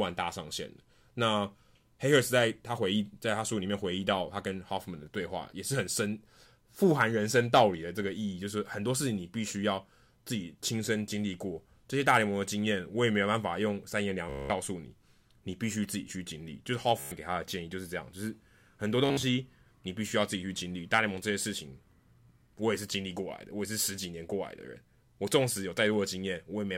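Speech with Bluetooth stutter, where audio packets from the wireless link arrived late or not at all and the receiver kept replaying its last short buffer until fresh data came. Each dropout is heard as a rapid mechanical buzz, after which the speech jumps ahead as though it had carried on. There are three: 14.30 to 14.50 s (about 200 ms lost), 17.00 to 17.12 s (about 120 ms), and 19.06 to 19.23 s, where about 130 ms goes missing in scattered bursts, the longest 58 ms.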